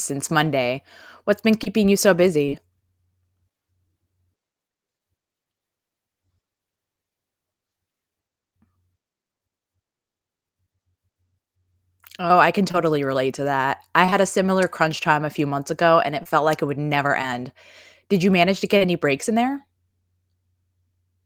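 Between 1.63 and 2.54 s, scattered short gaps appear: roughly three packets arrived late or not at all, each a brief hole of about 20 ms at most. The receiver bridged each one by extending the preceding speech, leaving small ticks and hiccups in otherwise clear speech.

Later, short concealed packet loss recurs at 12.72–12.76, 14.06–14.13 (two consecutive packets), 16.23–16.27, 17.21–17.28 and 18.77–18.86 s. Each time 20 ms of audio failed to reach the decoder, 40 ms at the last point. Concealment carried the previous sound forward and blended back, producing brief smears or wobbles where a short consonant can drop out.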